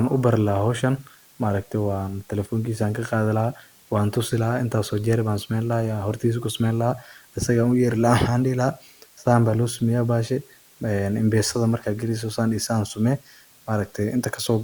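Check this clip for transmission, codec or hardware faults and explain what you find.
Low bit depth with dither runs through the whole speech clip, audible as a constant, even hiss sitting roughly 30 dB below the voice. Each sample has been rounded to very few levels, which fits a 9-bit signal, with dither added first so the rounding error spreads into steady white noise instead of distortion.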